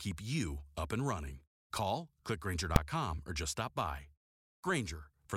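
Invalid numbers at full scale at 2.76 s: a calculation produced infinite or invalid values that were clamped to the largest possible sample value. That held the output flat at one extreme value, far beyond the speech peaks, for about 3 ms, which fits a 128-sample block, so the speech is broken by a single sharp bang.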